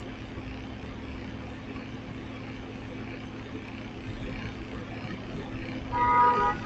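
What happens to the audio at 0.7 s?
At 0.7 s, as across the whole clip, a noise suppressor applied to these sounds treats steady ambience as noise, pulling sustained parts down by roughly 5 dB so the level pumps.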